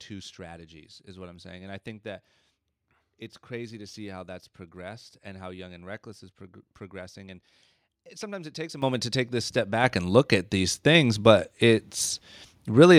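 Microphone volume stepped up at 8.82 s and again at 9.84 s. The calling software judged the input too quiet and raised the microphone's input volume in single jumps, first by about 10 dB, then about 5 dB a second later. Because the change happens before any processing, the speech and the background noise jump louder together, so each step is an abrupt lift in level rather than a gradual swell.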